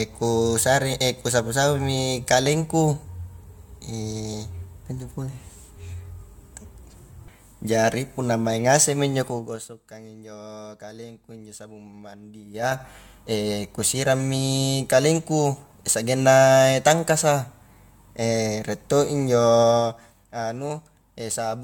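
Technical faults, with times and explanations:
Throughout: generation loss. The sound has a swirly, hollow, smeared quality, and consonant attacks blur rather than land crisply. Nothing is present above 17.9 kHz. The likely cause is repeated lossy coding, with the character pointing to AAC-LC at around 96 kbit/s, applied about three times over. Each decode and re-encode quantises the signal again on a shifted frame grid, so noise and spectral gaps pile up beyond what one pass at that rate would leave.
12.46 to 12.80 s: zipper noise. While the level changes by about 20 dB, a fast ticking rides on top of the sound. The gain moves in 5 dB jumps, roughly ten per second, with no smoothing between them. Each jump is an abrupt discontinuity in the waveform and produces its own small click, so the run of clicks reads as a zip.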